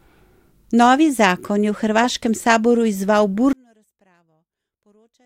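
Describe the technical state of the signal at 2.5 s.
At 2.5 s the speech signal is intact, with no audible fault at that point.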